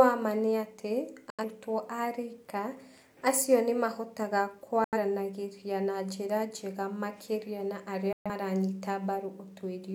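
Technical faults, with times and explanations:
1.30–1.44 s, 4.84–4.98 s, 8.13–8.30 s: digital broadcast dropout. The speech abruptly mutes, then resumes further along, skipping content each time. Failed frames silenced the receiver; the losses of about 85 ms, 85 ms and 128 ms fit two, two and three missing frames. The waveform drops to near silence, and the spectrogram shows blank vertical gaps across all frequencies.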